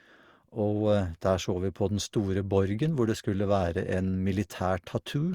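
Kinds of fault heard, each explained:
Generation loss: the speech sounds swirly, smeared and hollow throughout, with blurred attacks, more than one pass of 64 kbit/s Opus would explain. It's likely been re-encoded around four times, each pass stacking fresh quantisation noise on a shifted frame grid.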